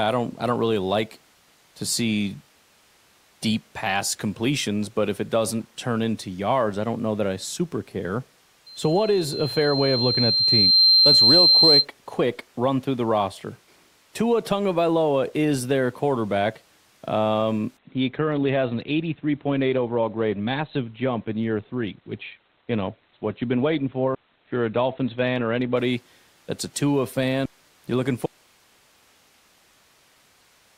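From 8.66 s to 11.86 s there is loudspeaker feedback squeal. A microphone was picking up the loudspeaker it was feeding, and at 4.1 kHz the loop gain passed unity, so that tone fed on itself. It swells over roughly two seconds into a piercing whistle that ends up around 10 dB above the speech. On a spectrogram it is a single bright horizontal line at 4.1 kHz that brightens as it grows. In the waveform the envelope rises steadily over the same stretch.

At 17.77 s the audio abruptly turns dull, with no gap, and stays that way until 25.77 s. This is an adaptive stream at a lower bitrate. The connection slowed and the player switched to a much leaner encoding, which fits a step down to a low-bitrate Opus stream. Nothing above 4.5 kHz survives. A spectrogram shows a hard ceiling at 4.5 kHz across those eight seconds, with the upper band empty, and the full-range spectrum returns at the end.

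At 28.26 s the speech cuts out mid-flow and does not return before the end of the clip. This is an audio dropout to a faint residue. The signal was lost while the path after the break stayed live, which likely points to an interrupted source or link. What remains is steady hiss some 35 dB below the speech level. In the waveform the amplitude collapses in a single step to a thin flat band, and the spectrogram turns to uniform faint noise.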